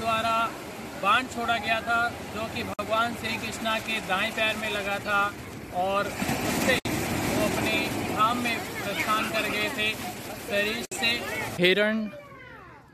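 At 2.74 to 2.79 s, 6.79 to 6.85 s and 10.85 to 10.92 s, about 4 s apart, the sound drops out for 53, 64 and 64 ms. Each is a gap at a join of encoded pieces: separately encoded segments were joined untrimmed, so each piece's encoder start-up delay and padded last frame remain. Each is heard as a brief hole before the sound resumes where it stopped. A waveform shows a flat stretch with smeared edges, and a spectrogram shows a blank vertical band across all frequencies.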